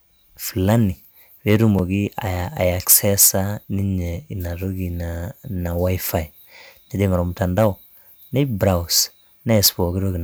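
Hard clipping first appears from 1.49 to 1.64 s, with the speech overdriving the stage by about 3 dB. At 1.79 s a 5 ms gap of silence cuts in, likely a Bluetooth stall from a buffer running dry. On the waveform it shows as a brief flat line at zero, and on the spectrogram as a thin vertical blank across all frequencies. Clipping returns from 2.90 to 3.29 s at about 6 dB, the harshest stretch, then from 7.42 to 7.66 s and 9.55 to 9.68 s, both at about 4 dB. Each time the peaks are sheared flat, giving a crackly fuzz on the loudest syllables. The waveform shows squared-off tops, and the spectrogram shows smeared harmonic energy reaching far up.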